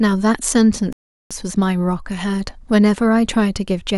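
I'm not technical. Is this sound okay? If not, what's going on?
No. At 0.93 s the speech cuts out for about 0.38 s, a playback stall. The player likely ran short of data, then resumed at 1.31 s.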